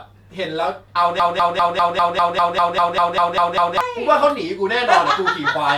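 Speech with a broken-record loop from 1.2 to 3.8 s: a 0.2 s fragment repeats 13 times, likely a stalled player or stream, and the intended audio is lost.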